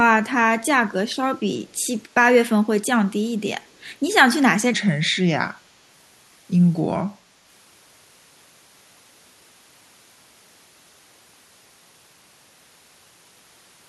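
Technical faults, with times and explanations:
1.12–1.16 s and 1.68–2.03 s, echo leak: a very faint delayed copy of the speech, roughly 40 dB below it, trails the original by 288 ms. This is likely a far-end speakerphone whose echo canceller let part of the loudspeaker pickup return down the line.
4.73–7.76 s, section at the wrong speed: this stretch plays at 0.842 times normal speed, so the speech sounds slower and roughly three semitones deeper. Speed and pitch drop together, likely because the segment was played or resampled against the wrong clock.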